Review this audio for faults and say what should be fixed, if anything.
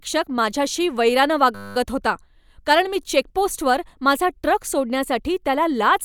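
A system hang loop at 1.55 to 1.76 s: a stalled driver left the hardware replaying one 10 ms buffer, producing a steady 100 Hz buzz. To prevent it, give the audio thread real-time priority and keep blocking work off it, so the driver never stalls long enough for the ring buffer to wrap.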